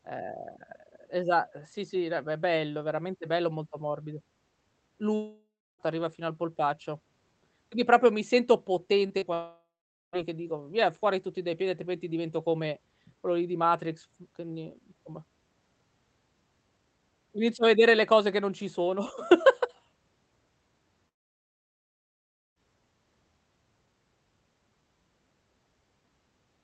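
Long network dropouts in this speech clip occur at 5.15–5.82 s, 9.34–10.16 s and 21.09–22.59 s, where the sound breaks off and is likely caused by the stream of packets stopping altogether. At each break the receiver stretches the last sound into a fading buzz or hiss, then falls silent for about 0.29 s, 0.45 s and 1.46 s respectively. The lost stretches, about 0.64 s, 0.8 s and 1.48 s long, never return, and the speech resumes after the gap. Short concealed packet loss appears just before the second dropout, at 9.07–9.13 s and 9.18–9.25 s. Each hole is about 40 ms of missing audio that the decoder patches by extending the preceding sound, voiced or noisy, before blending back into the real signal. The result is a quick smear or wobble that can swallow a brief consonant. Underneath everything, the call codec limits the audio to about 8 kHz.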